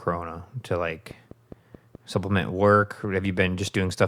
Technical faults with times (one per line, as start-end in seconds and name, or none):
1.11-3.91 train of clicks